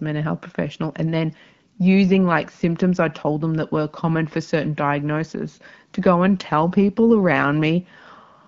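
Nothing goes wrong anywhere in this speech recording; it arrives over an AMR wideband (HD Voice) link at 12.65 kbit/s, and that codec leaves only a light touch on the sound.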